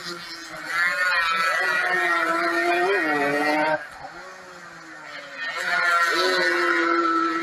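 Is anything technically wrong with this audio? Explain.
Yes. A noise suppressor meant for speech has been applied to music or sounds throughout the clip. It treats steady, sustained material and decaying tails as background noise and pulls them down, while sharp onsets mostly pass. The gain keeps shifting by around 10 dB as it decides what counts as noise, so the sound pumps and flutters, and held parts thin out instead of sustaining evenly.

Sound cut by the noise suppressor occurs from 0.00 to 0.75 s and again from 3.78 to 5.65 s. In these stretches the suppressor judged the material to be noise and turned it down harder than elsewhere, by up to about 9 dB in the first section and about 10 dB in the second. Sustained and fading sound sinks and tails end early, for a bit under a second at the start and close to two seconds in the middle.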